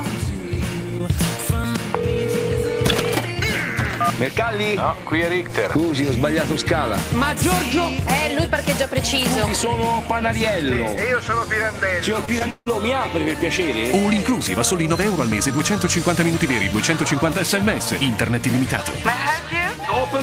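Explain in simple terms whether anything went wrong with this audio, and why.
Short concealed packet loss at 12.25 s and again at 12.39 s: each time about 20 ms of audio arrived too late to play. The receiver patched each gap by stretching the sound just before it, so you hear a tiny smear or wobble.

Long network dropout from 12.50 to 12.71 s: about 160 ms of sound goes missing. It is filled by a fading continuation of the previous sound, then about 40 ms of silence, before the audio returns without the lost part. The likely cause is a break in the network connection.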